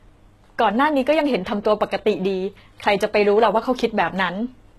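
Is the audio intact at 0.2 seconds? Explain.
No, the speech at 0.2 s already carries the HE-AAC compression heard throughout, likely from a low-bitrate stream around 16 kbps. The treble above the core band is rebuilt by copying lower bands upward, so sibilants sound gritty and metallic, and nothing remains above about 12.3 kHz.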